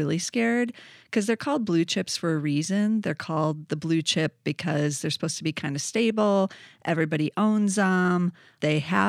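No technical faults can be heard anywhere in the speech. There is nothing to place in time or trace to a cause.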